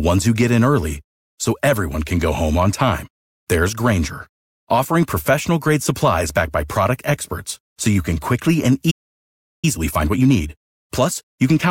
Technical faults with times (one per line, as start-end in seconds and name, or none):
8.90-9.65 playback stall
9.65-11.70 time-compressed catch-up